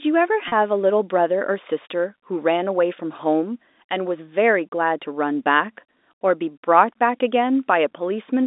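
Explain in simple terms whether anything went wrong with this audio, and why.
Packet loss with pitch repetition, from 0.48 to 0.52 s: about 40 ms of sound never arrived, which fits two lost packets on the line. To hide the hole, the receiver replayed the last stretch of vibration over and over, so the sound briefly holds one steady, slightly buzzy tone instead of moving on. The gap is short enough that this stand-in covers it completely, without fading into silence, and the sound then carries on through the narrow telephone-band coding.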